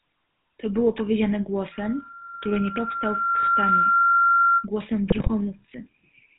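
The whole clip runs through the GSM full-rate codec, and the damage is plain. The speech has that buzzy, gravelly texture, nothing gets through above 4 kHz, and the coarse pulse-driven excitation fits the old 13 kbps full-rate scheme.

From 1.71 s to 4.67 s there's a loudspeaker feedback squeal. The mic is hearing its own speaker, and at 1.4 kHz the loop gain tops one, so that single tone swells over around two seconds until it's sitting roughly 10 dB above the speech.

Then from 5.10 s to 5.31 s come GSM bit errors. Corrupted filter, pitch and gain values hit a short run of frames, bending the spectrum and spiking the level, so the speech briefly dissolves into squawks, pops and a gargly mess.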